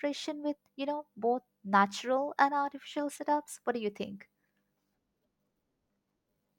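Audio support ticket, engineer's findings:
Nothing stood out on listening to the speech in this clip.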